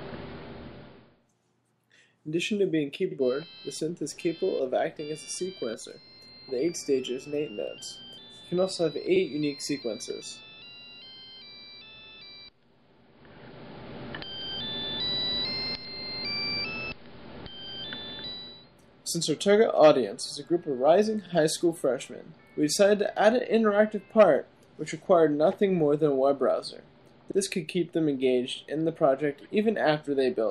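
At about 25.51 to 25.53 s there's a corrupt frame decoded: a single compressed frame arrived with flipped bits, and the decoder played it anyway. The misread gains and codes throw energy into the wrong frequencies for those 20 ms, so you get a short blip or squeak in the sound.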